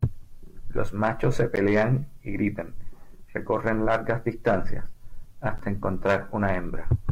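Gap between stream segments at 1.56 s and again at 5.58 s: the speech drops out abruptly for about 12 ms each time, with hard edges on both sides. The time stamps at a segment boundary don't quite meet, so the player pads the space with silence. Nothing is actually lost. Instead, about 12 ms of extra time is inserted. The spacing of the two holes fits 2-second stream segments.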